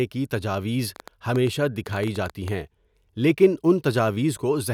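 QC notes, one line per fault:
0.96–2.49 s: train of clicks. Around fifteen similar pops at about 8.6 per second, unevenly spaced, tick over the speech and peak a few dB above it, likely interference from nearby equipment or a faulty connection. Spectrogram: thin full-band vertical lines. Waveform: narrow isolated spikes.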